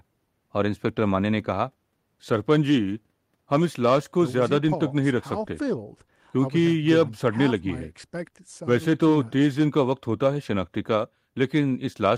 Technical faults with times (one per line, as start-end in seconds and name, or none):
none